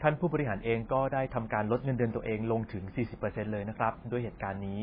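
Wi-Fi interference runs through the whole of this speech recording as a faint, steady ticking about ten times a second, spaced 102.4 ms apart. That spacing is the beacon interval of a nearby Wi-Fi radio, whose bursts are picked up and rectified by the audio circuitry. The ticks sit well beneath the speech, roughly 40 dB down. MP3 compression damage is also present from start to finish, and it is heavy. Nothing survives above 5 kHz, so the top end is cut off flat. Weak spectral detail flickers in and out between frames, which gives the voice a watery, swirling texture, metallic sibilants and smeared consonant onsets. That degree of loss is likely the result of encoding at a very low bitrate, around 16 kbps.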